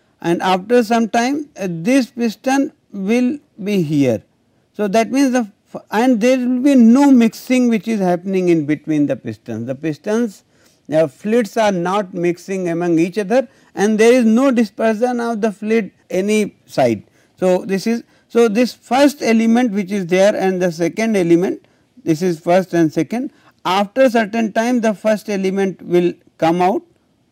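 Nothing stood out on listening to this recording.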